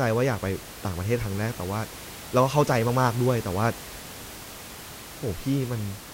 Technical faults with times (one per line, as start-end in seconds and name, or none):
none